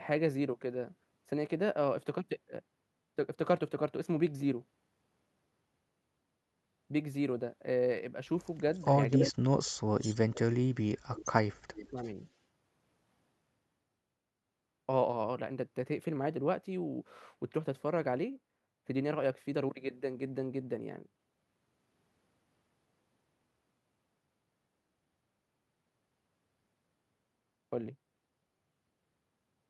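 At 8.75 to 8.85 s a faint echo leak appears: a delayed copy of the speech about 330 ms behind the original, likely from a far-end loudspeaker whose echo canceller let residual pickup through. The same delayed copy returns at 9.24 to 9.33 s, much louder, then at 9.99 to 10.15 s and 11.75 to 12.1 s at moderate levels, all at a consistent 330 to 336 ms delay.

Overlapping this, speech suppressed in double talk cuts the talker from 9.2 to 10.41 s and 10.59 to 11.41 s. The level plunges deeply, likely because the canceller could not separate near speech from echo. A brief, shallow dip follows at 11.9 s.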